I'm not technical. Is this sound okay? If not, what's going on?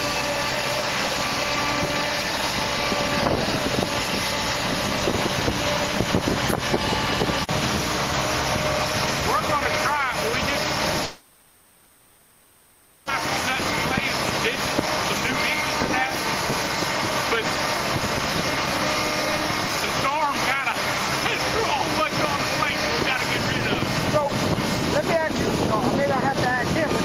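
No. From about 11.03 to 13.10 seconds there is a long network dropout, likely caused by the connection stalling so that about two seconds of audio never arrived. The playback device filled the whole gap itself, stretching the last bit of sound into a fading buzz or hiss and then a low, steady noise rather than true silence. When the sound returns at 13.10 seconds, it skips ahead, and the missing two seconds are gone for good.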